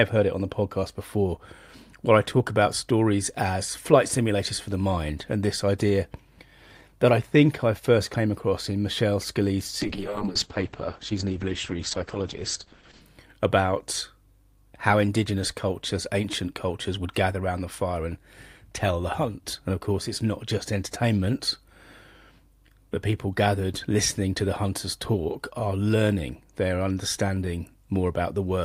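A call bitrate drop runs from 9.82 to 13.07 s in this speech clip, holding its lowest point for about 3.2 s. The sound turns rough and muffled as the encoder, starved of bits, codes coarsely and cuts the bandwidth from 20 kHz to 8 kHz, which fits a fall from roughly 64 to 9 kbps.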